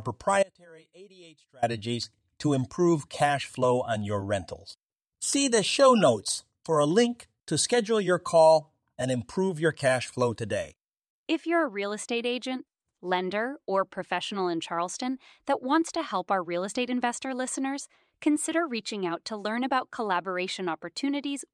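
At 0.43 s the speech drops out abruptly until 1.62 s, an audio dropout to a faint residue about 30 dB down, likely a brief signal loss upstream.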